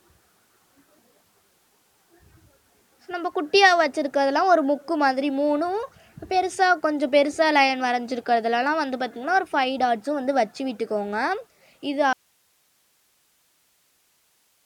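At 12.13 s an audio dropout to a faint residue abruptly leaves hiss about 45 dB down, likely a lost feed. The waveform flattens thereafter.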